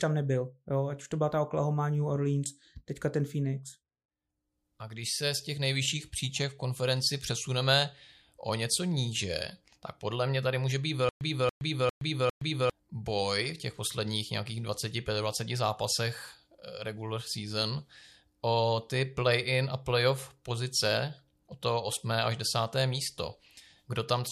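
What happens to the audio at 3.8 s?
Nothing goes wrong at 3.8 s: the speech carries straight through that moment with no dropout, click, glitch or other audible fault.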